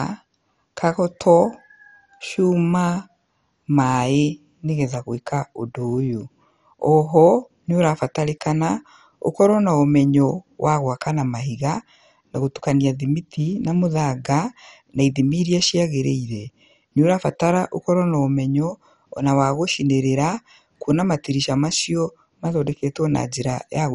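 Speech, and from start to finish it has the dull, gurgling, granular texture of MP2 compression, likely from Layer II coding at a starved rate that fits roughly 48 kbps. Nothing survives above 11.3 kHz, and the upper sub-bands flicker in and out while the remaining ones sound coarsely quantised. A plain low-pass filter would sound cleanly muffled. MP3 would bring swirly, watery artefacts. Here the roughness sounds grainy and band-wise.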